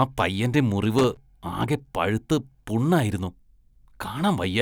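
At 0.98 s a burst of loose connector crackle breaks into the speech. It lasts until 1.17 s, just under a fifth of a second. A worn or dirty contact in the signal path is making and breaking as it shifts. Each break chops the signal off for an instant. Any DC sitting on the line turns each reconnection into a pop. The result is a rough, irregular scratching that rides over the speech.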